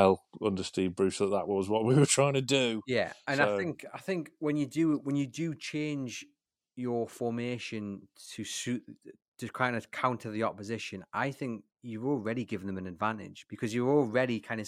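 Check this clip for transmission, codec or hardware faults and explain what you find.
Nothing stood out on listening to the speech here.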